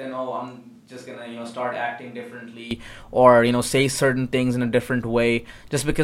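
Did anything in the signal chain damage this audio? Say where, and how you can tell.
Yes. At the capture stage, the close microphone's feed likely dropped out, leaving a switch to a distant microphone from the start until 2.71 s: speech sounds roomy, hollow and thin, about 10 dB quieter, with faint room noise, then snaps back before "or you know say".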